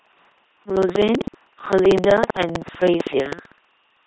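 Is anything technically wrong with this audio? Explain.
Yes, two faults run through the whole speech clip.

Throughout, the voice is a buzzing, mechanical robot sound with stray hiss or buzz where sounds are misjudged. This is heavy LPC-10 vocoder damage, consistent with 2.4 kbit/s: a ten-pole filter excited by either pulses or noise, never a mix.

Also throughout, a rattling buzz at about 15.6 Hz sits on the speech and stops in silence. This is buffer tearing, which fits a 1024-sample buffer. Writer and reader cross inside each period, so roughly a tenth of every buffer replays audio from around 150 ms earlier, hard-joined on both sides.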